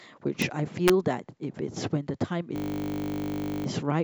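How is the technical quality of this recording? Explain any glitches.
The recording has clear technical problems: two sharp digital cracks early on and a stretch of mechanical buzzing later in the speech.

Integer overflow strikes at 0.42 s and again at 0.88 s. On loud peaks the sample values exceeded the largest representable integer and wrapped to the opposite sign instead of being limited, so each peak snaps across the full range. The result is a brief, violent crack, harsher than clipping.

A system hang loop runs from 2.56 to 3.66 s. The processing side stalled while the audio hardware kept replaying the same 20 ms slice of its ring buffer, about fifty-five times. At a 50 Hz repeat rate this becomes a steady, flat buzz, with little or no new audio getting through.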